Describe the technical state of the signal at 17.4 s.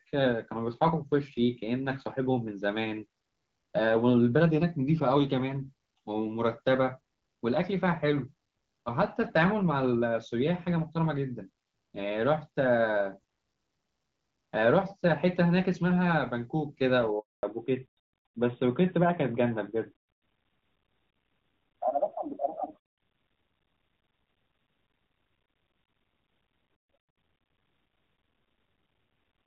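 At 17.4 s the call is in the middle of a handover gap running from 17.19 to 17.43 s. While the phone switched networks, no speech frames got through for 240 ms, so the sound dies away within a few tens of milliseconds and leaves dead silence. Whatever was said in that gap is lost.

At 17.43 s the new link comes in with a fallback to narrowband that lasts to the end of the clip. The call has dropped from HD Voice to an older narrowband codec, and everything above 4 kHz is gone. Speech turns duller and rougher, which fits a move from AMR-WB at about 12.65 kbit/s to AMR-NB at about 12.2 kbit/s.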